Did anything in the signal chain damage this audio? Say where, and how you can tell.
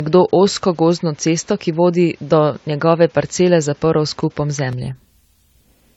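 Yes. Codec stage: the speech sounds swirly, hollow and smeared throughout, with soft attacks. This likely reflects generation loss from about four AAC-LC passes at 64 kbit/s, with nothing above 19.3 kHz.

Input device stage: from 0.00 to 4.73 s the band stops at 7.6 kHz, with noise about 35 dB down. At 4.73 s the sound opens up, with no gap, which points to an input switched to a poorer device.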